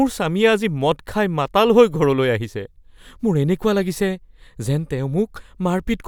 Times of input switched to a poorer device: none

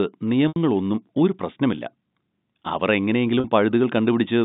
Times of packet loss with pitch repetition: 0.48-0.56, 3.40-3.44

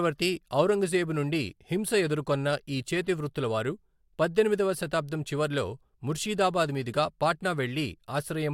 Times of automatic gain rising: none

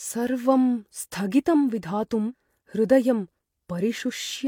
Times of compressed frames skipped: 2.28-2.33

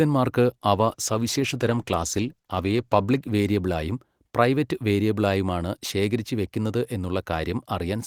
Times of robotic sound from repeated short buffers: none

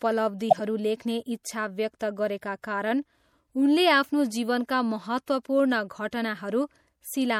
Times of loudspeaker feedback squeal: none

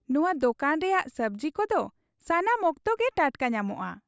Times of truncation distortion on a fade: none

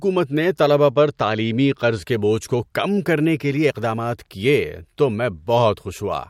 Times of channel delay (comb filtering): 0.90-2.02

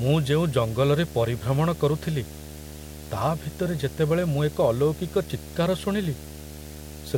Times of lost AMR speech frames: none

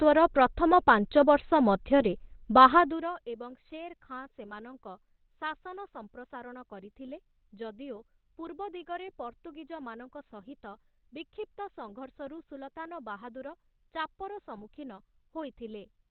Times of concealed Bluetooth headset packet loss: none

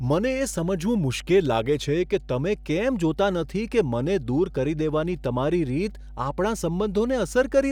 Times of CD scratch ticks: none

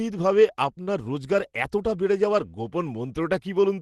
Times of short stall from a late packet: 0.83-0.89

